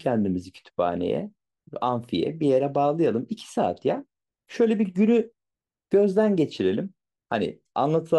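A speech recording with no audible technical faults anywhere in the signal.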